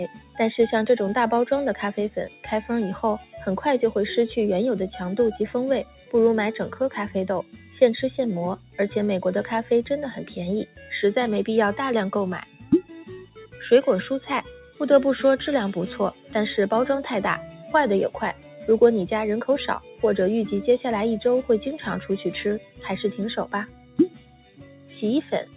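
A noise suppressor built for speech has been applied to this sound, and it stays on for the whole clip. It mistakes sustained and fading material for noise and pulls it down. Sudden onsets get through, but held parts sink. The level swings by around 10 dB, so the audio pumps or thins. Everything is band-limited with nothing above 4 kHz, which fits a G.711 mu-law call path at 64 kbps.

The sound is cut by the noise suppressor five times. The first is from 0.09 to 0.38 s, dipping about 11 dB for roughly 0.3 s. The second, from 2.29 to 3.34 s, drops about 10 dB for about 0.3 s in total. The third, from 5.85 to 10.91 s, drops about 11 dB, with around a second affected. The fourth, from 12.45 to 20.03 s, drops about 11 dB, with about 1.5 s affected. The last runs from 22.59 s to the end, sinking about 12 dB. In each one, decays are clipped short or sustained parts sag.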